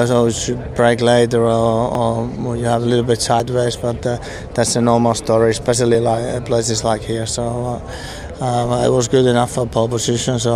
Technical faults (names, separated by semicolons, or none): overlap between stream segments